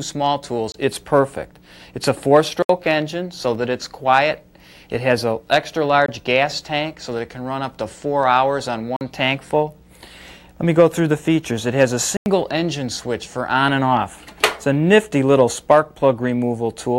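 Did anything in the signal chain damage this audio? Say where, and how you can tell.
Yes, blocks of digital silence at the driver or buffer stage: holes at 0.72 s (23 ms), 2.62 s (70 ms), 3.55 s (6 ms), 6.06 s (23 ms), 8.96 s (46 ms) and 12.17 s (93 ms). The shortest sounds like a tick and the longer ones like short holes. Several lengths fit whole buffers of 1024, 2048 and 4096 samples, so the output was not filled in time. Unlike network loss concealment, nothing fades or gets patched in; the signal cuts to silence and back with no fade.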